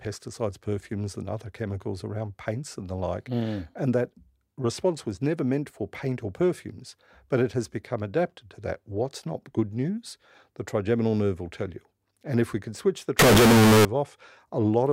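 From 13.19 to 13.85 s, a float read as integer burst turns the speech into a loud, harsh, near-square waveform at an almost fixed, high level, likely 32-bit float samples read as 32-bit integers.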